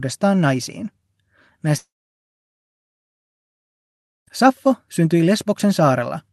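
At 1.77 s the speech cuts out and doesn't return until 4.28 s, which sounds like a long network dropout is the likely cause. About 2.5 s is lost. The receiver smears the last sound into a brief fading buzz, then sits in near-silence before picking up mid-stream, the gap never recovered.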